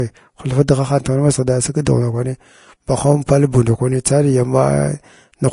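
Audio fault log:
throughout Vorbis compression: the speech carries a grainy, hissy texture and nothing above 10.5 kHz. This is likely low-bitrate Vorbis coding, a level that fits roughly 35 kbps. The encoder codes a smooth spectral floor with a quantised residue on top and quantises the upper band so coarsely that fine detail turns into noise of similar energy. Band-limited noise, which sits as a steady layer, differs from this roughness, which rides on the speech itself and comes and goes with it.
1.85 and 4.04 s pre-echo: a short burst of hiss comes just ahead of a sharp onset. The first lasts about 15 ms after "masighda sig" and the second about 10 ms after "pal buu ndakwani". The transform spreads quantisation noise across its whole block, so noise sized for the loud attack leaks into the quiet moment before it, and the attack sounds smeared. A click is a single impulse, and a reverb tail follows the sound. 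This hiss comes before the onset instead.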